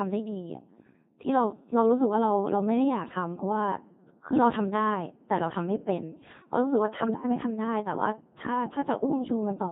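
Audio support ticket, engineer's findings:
Codec 2 vocoder, whole clip. Speech robotic and buzzy, heavy damage, consistent with a 2.4 kbit/s setting. Probable component: low-rate digital-radio vocoder. Mechanism: only pitch, voicing, energy and spectral envelope transmitted; decoder rebuilds the voice from sine waves, so the original waveform and fine detail are gone.

Bit errors on digital voice radio, 7.00 to 7.24 s. Sudden jumps in pitch, level and tone colour, breaking into warbling, bleeping gibberish. Probable cause: corrupted bits on the radio link, a few percent error rate. Mechanism: each bit steers parameters for a whole frame, so errors spread across the burst, roughly eight frames.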